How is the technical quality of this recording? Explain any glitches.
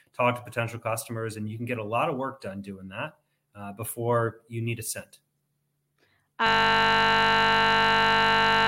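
There's one serious glitch. At 6.47 s the recording runs into a system hang loop that lasts right to the end. The computer or audio driver seems to have frozen while the sound hardware kept replaying the same 20 ms slice of its buffer, over and over, more than a hundred times. Because that loop is so short, the speech disappears into a steady buzz at 50 Hz instead of a stutter.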